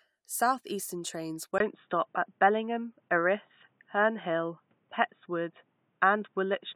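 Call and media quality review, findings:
Input switched to a poorer device at 1.58 s, persisting to end. Brief 20 ms gap, then boxy sound, nothing above 3.8 kHz, new noise floor, level shift around 5 dB. Likely headset call profile or fallback microphone with narrower capture band.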